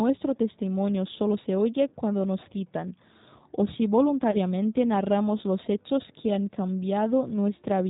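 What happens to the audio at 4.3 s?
Right after "nos citan o si" there's a dropout, from about 4.31 to 4.37 s, covered up by VoIP packet loss concealment in the speech codec. Roughly 30 ms of audio went missing, which fits a single lost packet. The decoder filled the hole by carrying its last pitch and vocal-tract filter forward with falling gain, so you hear a short stretched sound, a buzzy tone or coloured noise, that fades. The voice stays weak or distorted for a while after the packets return, going into "narramos los hechos que".

All of this sits on top of the G.729 codec, which runs through the whole clip at 8 kbit/s, in its G.729A form. It rebuilds speech from a vocal-tract filter, a pitch predictor and a handful of pulses per frame rather than sending the waveform itself, and it passes nothing above 4 kHz. So the voice sounds band-limited and clearly rough and synthetic around this point too. 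That's also why the concealment sounds the way it does: it's just extending that same model.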